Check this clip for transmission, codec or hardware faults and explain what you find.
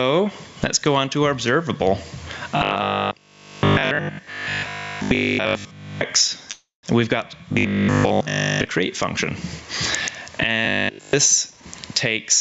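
Four kinds of fault are present: gain pumping across the whole clip, three stretches of robotic buzzing, one call audio freeze, and a jitter buffer speed-up near the end. The audio is band-limited to 8 kHz by the call path, as expected.

Gain pumping runs from start to finish. The level swing is around 25 dB: the level is pushed down the moment anything loud arrives. The likely cause is input gain set far too high, with a fast limiter or compressor repeatedly clamping it. The result is a squashed, breathing sound with little difference between loud and quiet passages.

Robotic sound from repeated short buffers appears at 2.57 to 6.03 s, 7.53 to 8.69 s and 10.65 to 11.13 s. Each stretch carries a fixed 50 Hz buzz, which points to a 20 ms block being replayed. In the first two stretches most of the audio is repeated material, and in the last it is entirely repeated. This likely comes from fresh audio arriving too slowly, with the receiver looping the latest block instead. 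The sound becomes a rigid metallic drone that only loosely tracks the original.

The call audio freeze runs from 6.51 to 6.85 s. The last sound is stretched into a fading tail, and about 160 ms of that is silence. The filled gap lasts 316 ms. Afterwards the audio resumes exactly where it stopped, with nothing lost, but everything after it now runs about 0.32 s later. This is likely a jitter buffer running dry while packets were delayed in transit.

Jitter buffer speed-up occurs from 11.50 to 12.22 s. Playback runs at 127% of normal rate without any change in pitch, because roughly 0.2 s of audio is removed in many small pitch-period slices. The receiver does this to shrink a buffer that has grown too full. The passage sounds hurried and rushed.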